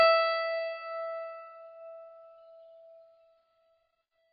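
AAC compression throughout: nothing survives above 5 kHz, so the music sounds dull and heavily smeared, likely from AAC-LC discarding detail to fit about 16 kbps.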